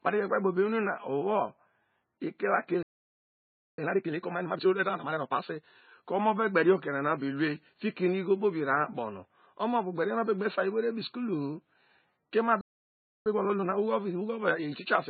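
Throughout, the speech has a smeared, swirly coding texture. This is low-bitrate audio saved at a high bitrate, likely an MP3 near 16 kbit/s re-encoded at 256 kbit/s. Unlike a simple low-pass filter, it leaves the first encoding's artefacts fully intact.

At 2.83 s a playback stall silences the speech until 3.78 s, about 0.95 s, likely because the player ran out of data. The sound halts mid-flow for nearly a second, far longer than a brief dropout.

Time-compressed catch-up follows from 3.78 to 5.68 s. The speech runs at 1.5 times speed but keeps its normal pitch. That unchanged pitch separates it from a plain speed-up. A second stall from 12.61 to 13.26 s, about 0.65 s, is followed by gentler catch-up at 1.15 times speed to the end.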